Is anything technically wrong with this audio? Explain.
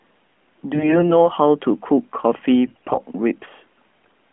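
Yes. From 0.74 to 1.28 s and again from 2.66 to 2.98 s the speech turns hoarse, scratchy and gargly while keeping roughly its pitch and loudness. These are AMR bit errors: around one bit in ten of the less protected parts of each frame arrived flipped, but the check on the critical bits still passed. So the excitation pulses landed in the wrong positions and the fine pitch, gain and spectral values were decoded wrongly, all within the narrowband phone sound of the AMR codec, whose light coding character fits its 12.2 kbps mode.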